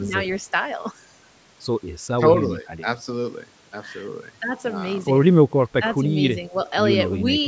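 Around 5.5 to 5.64 s, then 6.01 to 6.09 s and 6.49 to 6.55 s, the speech briefly sinks, deepest in the first dip, lightest in the second. That's likely speech suppressed in double talk, with the echo canceller mistaking overlapping talk for echo and ducking it.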